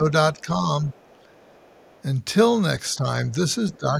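From 0.0 to 0.13 s, and again from 0.34 to 0.89 s, the echo canceller likely could not tell the talker from loudspeaker echo while both sides spoke, so speech is suppressed in double talk. The speech dips by roughly 10 dB at the start and more mildly later. Around 0.38 to 0.42 s and from 0.89 to 2.02 s, incomplete echo removal likely lets the other side's voice leak through, a faint trace far below the speech. At 2.96 to 3.06 s the same suppression likely brings another small dip. From 3.7 to 3.78 s a slightly stronger scrap of the other side's voice likely leaks through. From 3.78 s to the end, double-talk suppression likely cuts the speech hardest, by roughly 15 dB.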